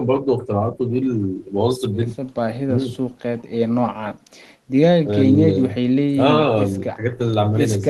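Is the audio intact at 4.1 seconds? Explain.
Yes, at 4.1 seconds the speech is intact, with no dropout, click, distortion or other fault to be heard at that moment.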